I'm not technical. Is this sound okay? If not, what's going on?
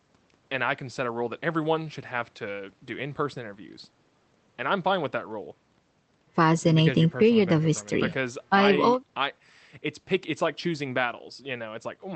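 Yes, the speech came over a normal Opus call link that keeps it within 8 kHz, and nothing in it sounds broken.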